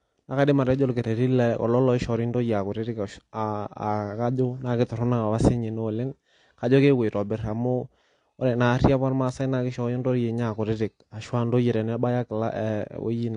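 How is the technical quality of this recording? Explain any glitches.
The technical quality is compromised by plainly audible codec damage across the whole recording. AAC compression throughout: nothing reaches above 9.8 kHz, and the speech sounds dull and smeared, most likely from AAC-LC at a low bitrate, around 32 kbps.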